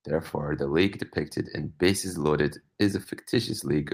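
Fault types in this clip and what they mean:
Short concealed packet loss: 20 ms of the speech was lost between 3.03 and 3.07 s, and the receiver extended the preceding sound for 13 ms, then blended back, leaving a brief smear instead of the silent gap of an unconcealed dropout.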